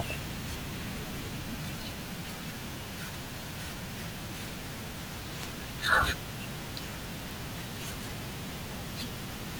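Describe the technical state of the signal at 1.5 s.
At 1.5 s the speech signal is intact, with no audible technical fault.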